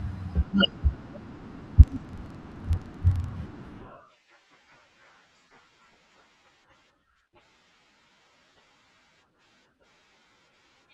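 From 1.84 s to 3.35 s the speech carries a filter restarted on every block: the filter discards its memory at each block boundary and begins again from silence, so every block opens with a small transient. This is heard as a rough buzz at about 23.4 Hz that rises and falls with the speech level, which fits a 2048-sample block. A spectrogram shows evenly spaced vertical lines, and the waveform shows regular tiny spikes.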